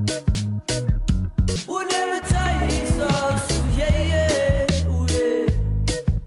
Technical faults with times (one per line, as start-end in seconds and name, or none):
0.35 compressed frames skipped
1.56 compressed frames skipped